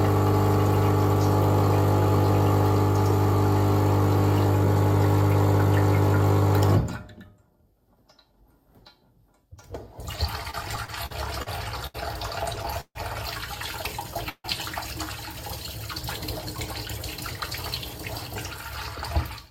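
A recording of everyday sound drags and stutters from 10.43 to 11.49 s through seven brief holds, the longest 44 ms, and again from 12.56 to 12.97 s through four holds totalling 171 ms, one of them 145 ms. These are repeated stalls (stutter): packets arrived late, so the jitter buffer kept running dry and the receiver extended the last sound each time. Between them, at 11.87 s, one sound is held about 75 ms too long, a short stall from a late packet that the receiver bridged before resuming at the same point. From 14.29 to 14.46 s the audio hangs as a fading buzz ending in about 40 ms of silence, a call audio freeze likely caused by packets delayed by roughly 150 ms in transit.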